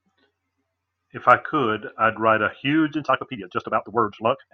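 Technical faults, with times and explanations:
2.92 to 4.53 s, time-stretched section: from 2.92 s to the end of the speech, the pace jumps abruptly to about 1.84 times the earlier rate while the pitch stays where it was, so the delivery turns rushed. This is likely software squeezing the passage to fit a shorter length, keeping pitch by dropping short slices of the waveform and butting the remaining pieces together, which leaves the hurried texture.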